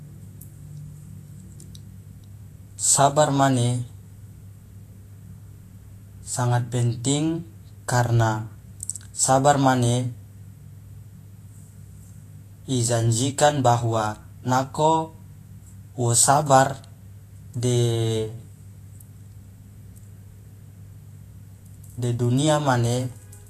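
From start to finish the speech carries plainly audible codec damage, most likely Vorbis compression at a low setting, which fits a bitrate near 35 kbps. Nothing survives above 14.2 kHz, and the treble just below that cut-off is quantised so coarsely that its fine detail turns into grainy hiss of similar energy. Consonants sound rough and smeared. Unlike a plain low-pass filter, the top end is noisy rather than dull.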